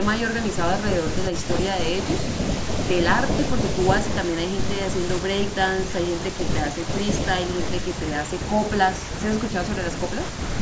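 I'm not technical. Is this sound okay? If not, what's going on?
Yes, no faults found; it's ordinary speech with the usual call microphone processing, which trims the deepest bass and leaves nothing above 8 kHz, both normal for a call.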